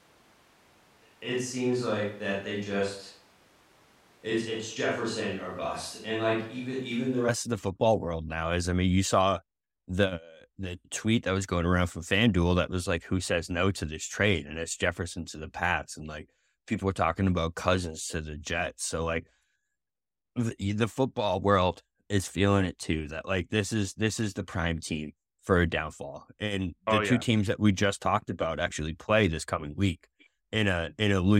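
From the start until 7.27 s, the close microphone's feed is likely missing, with a switch to a distant microphone in its place. The speech sounds roomy and hollow, thin in the bass, roughly 5 dB quieter, with room noise about 30 dB below it.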